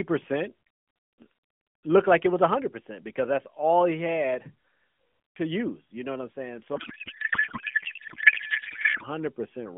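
A codec payload misread runs from 6.76 to 9.05 s: AMR frames packed in octet-aligned form are being unpacked as bandwidth-efficient, so every field lands in the wrong place and the narrowband speech collapses into garbled warble and noise that barely tracks it.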